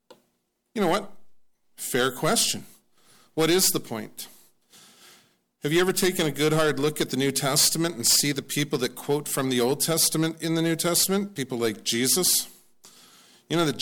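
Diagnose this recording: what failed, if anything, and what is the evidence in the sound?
A bit error spike occurred in the digital path, most plausibly a storage or transfer stage, where a flipped bit briefly pushed sample values up by a power of two before they dropped back. It is heard as two isolated, broadband ticks unrelated to the surrounding sound: one at 3.73 s from a single corrupted sample reaching about -18 dBFS, and a quieter one at 7.75 s spanning three consecutive samples at about -24 dBFS.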